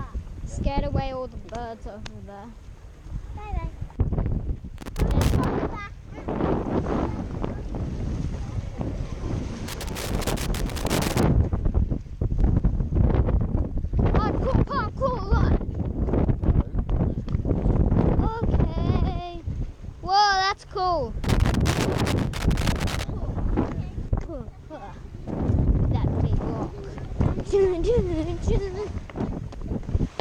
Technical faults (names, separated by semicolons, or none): loose connector crackle